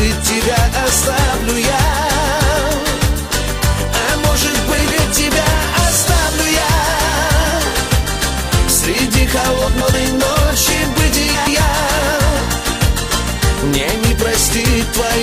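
Frames out of order at 4.78 to 5.04 s, 9.68 to 9.94 s and 11.34 to 11.60 s: in each, two adjacent blocks of about 128 ms, which fits runs of four frames each, play swapped, giving a garbled flutter, with no time lost.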